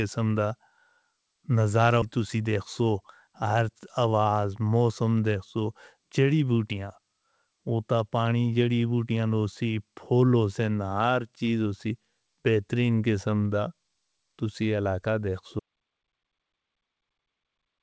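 At 2.02 s the speech jumps forward with no audible gap, losing roughly 0.4 s. This is a skip ahead, where a stretch was dropped while later audio already waited in the G.722 call path, whose sound stops at 8 kHz. From 2.18 to 4.28 s, ending just before "موسم دیکھ سو چڑی", the speech sounds hurried at unchanged pitch, running at 108%. This is a jitter buffer speed-up: the buffer trimmed short pitch-period pieces, about 150 ms in total, to shed excess delay. After "تسی علاقہ دیکھ", at 15.60 s, the sound cuts to complete silence with no room tone and stays silent to the end. This is an audio dropout to silence, likely from lost input while zeros kept being written.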